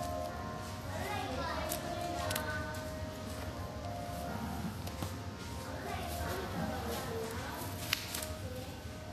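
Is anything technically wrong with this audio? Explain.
Yes, there's plainly audible codec damage running through the whole clip, and it's most likely Vorbis compression. Nothing comes through above 14.1 kHz, and the treble that remains sounds hissy and grainy, with tones roughened and attacks smeared. That fits a low-bitrate encode, somewhere around 36 kbps. At that rate the encoder lowers its cut-off and quantises the upper residue so coarsely that fine detail turns into noise of roughly the same energy.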